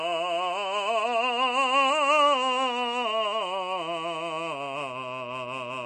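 From start to finish the music carries plainly audible coding damage, most likely MP3 compression. The treble stops dead at about 10.6 kHz, the fixed cutoff an encoder imposes when bits run short, and the texture sounds thin and unstable, which fits a low bitrate of around 40 kbps. Starved of bits, the encoder discards quieter frequency components and lets them drop in and out between frames, leaving the music dull at the top and watery.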